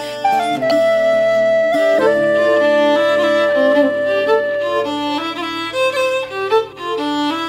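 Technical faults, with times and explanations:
0.70 s and 6.71–6.73 s, damaged data in a compressed stream: corrupted bytes make the decoder misread frames and lose sync until the next frame header, heard as brief blips.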